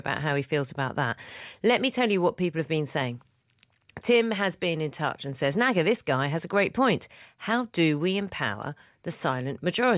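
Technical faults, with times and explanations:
No technical faults can be heard in the speech recording, and the signal stays steady and intact from its opening moment to its close.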